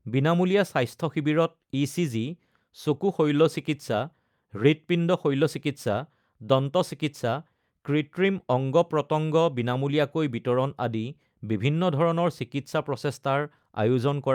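No technical faults can be heard anywhere in the speech. Nothing in the recording calls for a timestamp or comment.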